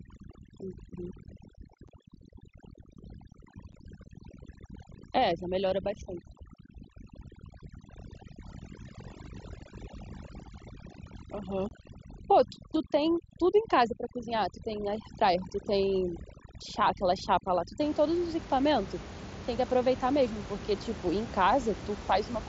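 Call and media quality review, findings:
Overdone noise removal, 0 to 17.8 s: background pulled down and broken into twinkling specks. Suppressor set too strong: bands near the noise estimate are cut, taking quiet speech with them. Unlike codec band dropout, the background changes too, and it ends at 17.8 s.

Unconcealed Bluetooth headset packet loss, 1.88 s and 3.72 s (7.5 ms each), 11.69 to 11.71 s (22.5 ms): short, hard-edged holes on the headset link, which fits one and three lost mSBC packets replaced by silence without concealment. Unlike suppressor gating, the gaps are abrupt and brief.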